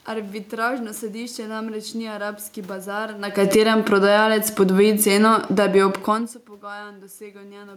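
Right after "namreč ni arabski bazar", at 3.24 s, the automatic gain falling begins: the gain control judged the input too loud, or its background noise too strong, and pulled its gain down slowly, about 10 dB in total, until 6.93 s. The speech sinks steadily over those seconds, and the room noise beneath it drops by the same amount, which separates this from the level shifts caused by the talker moving near 3 s and 6 s.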